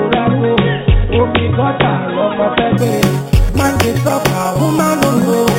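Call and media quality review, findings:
Bright metallic fizz from 2.78 s to end, level tracking the sound, lowest copy moving against pitch. Imaging from sample-and-hold upsampling: samples repeated without smoothing, spectrum mirrored above 4 kHz at about -17 dB, pointing to 8 kHz audio raised to 48 kHz.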